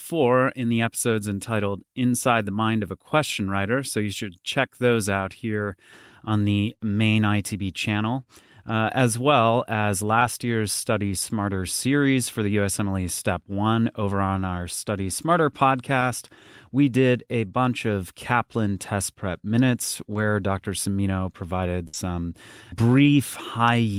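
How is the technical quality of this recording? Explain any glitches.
The recording has a handful of network dropouts.

There are three short concealed packet losses: at 10.19 s just after "uh as well as", at 15.99 s, and at 20.13 s right after "test prep minutes". Each time about 20 ms of audio didn't arrive in time. The receiver papered over it by stretching out the last bit of sound and then easing back into the real signal. You hear a quick smear or tiny wobble, and a brief consonant can get swallowed.

The burst of packet loss at 21.87 to 21.95 s is longer. Around 60 ms went missing in a row, which is more than the concealment can hide. The decoder kept extending the previous sound and fading it down, so you get a short held buzz or fading hiss. The audio then picks up further along with that stretch simply gone.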